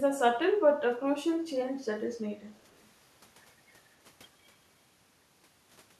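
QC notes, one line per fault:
1.44–1.5 s and 2.58–2.85 s, echo leak: a faint delayed copy of the speech trails in about 255 ms behind the original, very low, roughly 40 dB under the main level, a short scrap first and then a longer stretch. The likely cause is a far end on speakerphone whose echo canceller didn't fully scrub what its mic picked up, so the leftover got sent back down the line.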